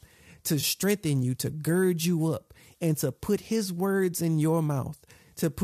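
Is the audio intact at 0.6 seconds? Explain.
No, there's an AAC frame loss with concealment from 0.61 to 0.64 s, just before "you to gird you". About 20 ms went missing, roughly two frames' worth, and the decoder patched the gap from the last good spectrum, so you hear a brief smeared, noisy blur.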